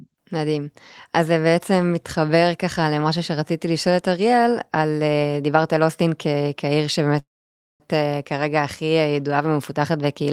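At 7.19 s the speech stalls in a call audio freeze lasting to 7.82 s: a brief fading buzz, then about 0.55 s of silence. Speech resumes exactly where it stopped, nothing skipped, unlike a dropout, so everything after runs about 0.6 s late, likely from delayed packets draining the jitter buffer.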